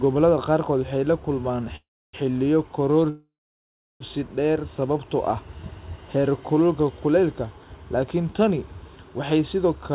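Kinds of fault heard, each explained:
Call audio freeze: speech stalls at 1.76 s for 0.4 s and after "kulmaan xilliyo" for 0.94 s, a brief fading tail then silence, likely delayed packets emptying the jitter buffer; unlike packet loss, nothing is skipped, so "dheer sababtoo ah" resumes exactly where it stopped.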